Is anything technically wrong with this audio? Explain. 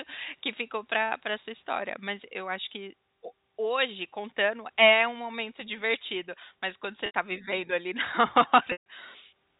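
Yes. This speech has packet loss with pitch repetition in two places, heard over a G.711 telephone-band signal that stops near 4 kHz. At 7.06 to 7.13 s, right after "quando você" and before "tá vivendo ali na", about 80 ms went missing. The receiver covered it by looping the last pitch period, so the sound holds as a brief buzzy sustain. At 8.72 to 8.86 s a longer 140 ms gap stretches past that fade, so the repeated period dies into silence and the speech returns through a short cross-fade. A plain dropout would leave a hard gap or click, while this stretches the pitch.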